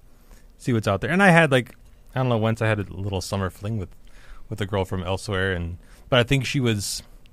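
Speech recording, no technical faults to report.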